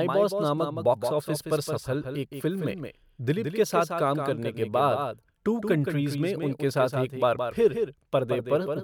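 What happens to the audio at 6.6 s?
At 6.6 s the speech is heard twice, as a doubled audio track running through the whole clip. A second full-band copy trails roughly 150 ms behind, about 5 dB quieter, with no room colour. A slower capture path likely mixed it in.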